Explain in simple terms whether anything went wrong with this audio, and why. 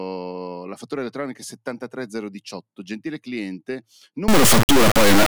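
Near the end of the clip, from 4.28 to 5.28 s, the audio suffers an integer read as float fault. The speech samples were stored as whole numbers, which fits 32-bit integer data, but the playback side treated them as 32-bit floating-point numbers. Those misread values come out either close to zero or wildly beyond the loudest allowed level, so the speech turns into a harsh, extremely loud buzzing square wave that falls silent wherever the speech gets very quiet.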